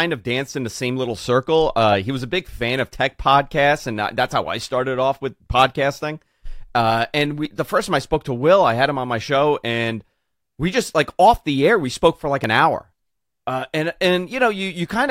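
At 7.45 s, just before "the first time I", the speech skips forward. At 12.44 s it skips again, between "we spoke for like" and "an hour". Each jump loses around 15 ms, spliced with no gap. Five-second spacing points to audio missing between chunks, likely at recorder changeovers.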